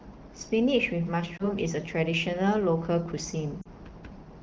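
At 1.38 to 1.47 s the speech dips and warbles briefly. These are lost AMR speech frames. The decoder repeats its last good settings at falling gain, which fits one 20 ms frame gone. At 3.62 to 3.67 s a drop toward near silence fits two frames.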